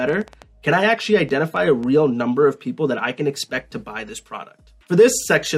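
A train of clicks runs from 0.09 to 1.84 s, about ten uneven pops at roughly 5.2 per second, peaking near signal level, likely from interference or a faulty connection.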